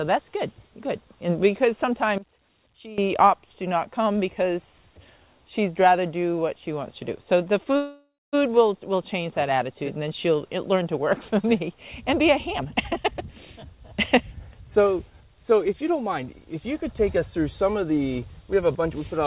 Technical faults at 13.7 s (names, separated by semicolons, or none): jitter buffer speed-up